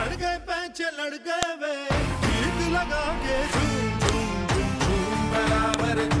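The audio was assembled from separate WAV pieces that were joined or streamed with their file headers left in place, so each header's few dozen bytes get decoded as sample values: a file header played as audio. Since those bytes bear no relation to the surrounding waveform, each one comes out as a sharp, loud click or snap, heard at 1.43 s, 4.09 s and 5.74 s, marking where each new piece begins.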